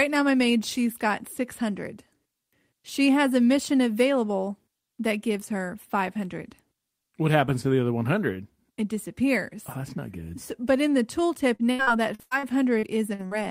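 After "but in the", 11.55–13.34 s, repeated packet loss: nine gaps, longest 79 ms, patched by repeating prior sound. Choppy, with pieces missing, and duplicated slices on a spectrogram.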